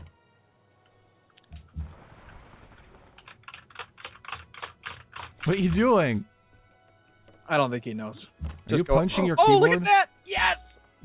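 No technical faults can be heard in this clip; the call path it passed through behaves as a narrowband phone line would, with nothing above about 4 kHz.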